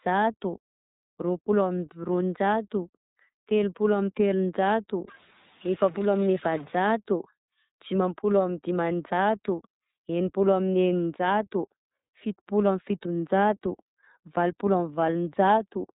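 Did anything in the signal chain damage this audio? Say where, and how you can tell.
Yes, the codec stage. The whole clip runs through iLBC, with nothing above about 3.8 kHz and a rough, slightly synthetic edge on the speech. Each 30 ms frame is coded on its own, which fits iLBC's 13.33 kbps mode, and the damage is plainly audible.

From 5.08 to 6.75 s there's added distortion, and any gaps fill with noise. That sounds like a stuck bit, likely a faulty converter or data line holding one bit fixed so about half the sample values shift, even tiny ones near silence.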